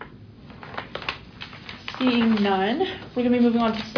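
Nothing in the audio stood out as a fault on listening.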